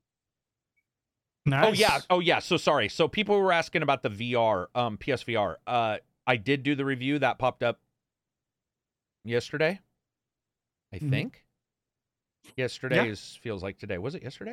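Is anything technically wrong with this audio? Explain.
Yes. There is one loud pop, from 1.89 to 1.91 s. A single sharp burst sits roughly ten decibels above the speech, which continues underneath. It is likely a sudden voltage pulse, such as static or a switch, added to the signal.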